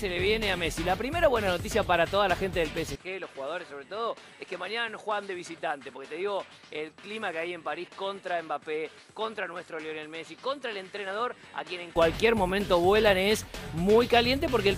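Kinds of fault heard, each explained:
Input switched to a poorer device: at 2.96 s the sound abruptly loses its top end, with nothing above 11.4 kHz, drops by around 10 dB, and picks up fresh background noise sitting roughly 35 dB under the signal. There's no gap at the change. It clears back up at 11.96 s. The likely cause is the system swapping to a different, narrower-band microphone or headset profile mid-recording and then switching back.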